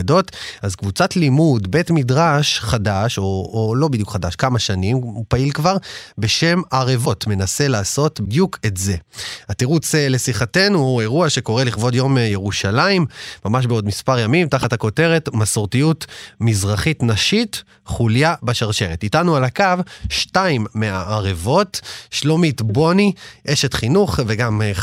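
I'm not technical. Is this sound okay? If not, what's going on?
No. At 7.04 to 7.07 s, 8.24 to 8.27 s and 14.62 to 14.64 s the speech has a brief glitch, a tiny chirp, scrap of noise or short gap lasting about one MP3 frame (26 ms). The likely cause is a broken MP3 bit reservoir: part of the file went missing, so the next frame read leftover data meant for another one. Unlike a simple dropout, the sound skips ahead and leaves a blip or short gap.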